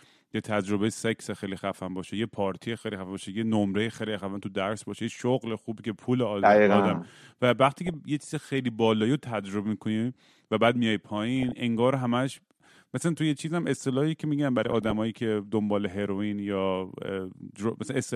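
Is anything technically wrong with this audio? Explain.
Yes. The speech has DAB burbling in three short bursts, from 7.78 to 7.94 s, 11.4 to 11.52 s, and 14.65 to 14.95 s. Weak reception lets a small fraction of bits slip past error correction into the MP2 stream, where corrupted samples put short blips of noise in single sub-bands and corrupted scale factors make sub-bands leap in level for up to a frame. It sounds like burbling over the speech rather than the silent gaps or repeated fragments of dropped packets.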